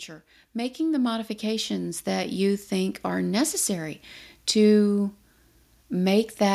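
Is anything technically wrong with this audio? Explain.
Yes. From 0.52 to 4.06 s, automatic gain rising: the gain control judges the input too quiet and ramps up about 10 dB, so voice and background swell together.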